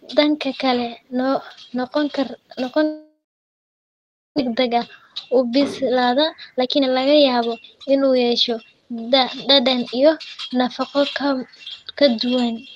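From 2.83 to 4.40 s the sound trails off into a fading buzz and then near-silence, likely a long network dropout, with about a second of audio never coming back. Then from 5.33 to 8.74 s the jitter buffer speed-up kicks in, running roughly 15% fast at unchanged pitch and trimming about half a second to catch up, so the speech feels hurried.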